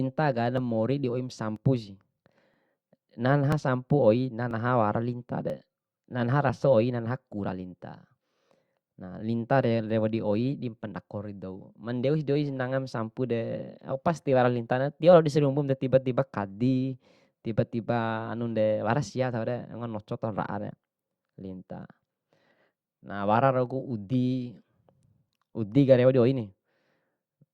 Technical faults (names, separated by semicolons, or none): overlap between stream segments